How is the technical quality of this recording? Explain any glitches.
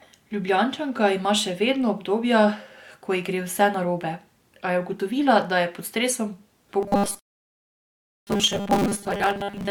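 The recording has two clear faults in its final three seconds, and they overlap.

From 6.81 s to the end at 9.71 s, the speech becomes a rigid metallic 200 Hz buzz. This is robotic sound from repeated short buffers, likely 5 ms chunks looped while most real audio is skipped. A spectrogram would show evenly spaced harmonic lines.

At 7.19 s a rebuffering stall cuts to silence until 8.27 s, adding 1.08 s before resuming exactly where it stopped. The waveform would show a flat gap.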